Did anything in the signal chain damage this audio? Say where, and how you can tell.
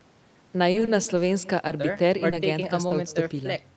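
Yes. The call path carries an echo with no canceller for the whole clip: a quieter, thinner copy of the speech trails each phrase at about 22 dB down and roughly 150 ms late. The far end's loudspeaker is feeding its microphone, and no echo canceller in the call processing removes it.

Repeated packet loss (robotic sound) hits the network stage from 0.71 to 1.19 s. Several holes, the longest about 30 ms, are patched by extending the preceding sound, so about a fifth of that stretch is synthetic. That produces a choppy texture with fragments missing.

Short concealed packet loss occurs at 1.67–1.71 s, 2.30–2.34 s and 2.88–2.92 s. At each point about 20 ms failed to reach the decoder in time. The Opus concealment fills it by continuing the last waveform and blending back, which leaves a brief smear or wobble.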